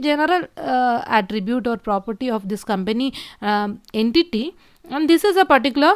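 No technical faults can be heard in the recording.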